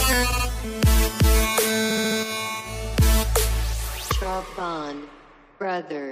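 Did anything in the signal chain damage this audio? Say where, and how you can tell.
Yes, repeated frames in the codec or storage stage. At 0.31 to 0.45 s a block of about 70 ms plays twice more, and at 1.89 to 2.17 s the same length of block plays four extra times. Each stutter repeats identical material at that fixed 70 ms period, which fits a short run of compressed frames being written or sent more than once. The clip grows by 139 ms and 279 ms. A network dropout would leave a gap or concealment smear instead of exact copies.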